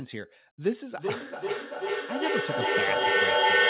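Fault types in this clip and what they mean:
Feedback echo between two devices: two devices sharing one call sit close enough that one device's microphone picks up what the other plays, and neither echo canceller can remove sound its own device did not output. From 0.96 s to the end, the speech keeps returning at roughly 400 ms intervals, and the repeats build up rather than fading, reaching about 9 dB above the original speech, all within a call band that stops at 4 kHz.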